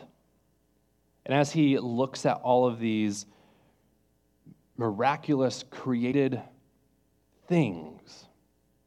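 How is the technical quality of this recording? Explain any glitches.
The speech has one glitch. Compressed frames are skipped at 6.11 s: whole frames of encoded audio never reach the output, so the sound lurches forward by about a tenth of a second.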